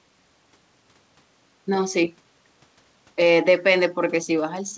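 Speech clip with no technical faults to report.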